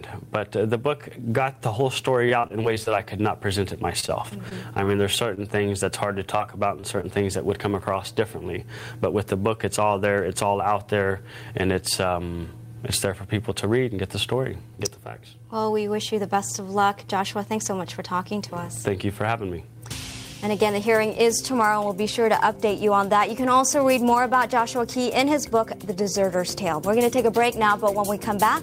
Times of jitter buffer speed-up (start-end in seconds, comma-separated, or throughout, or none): 11.81-12.21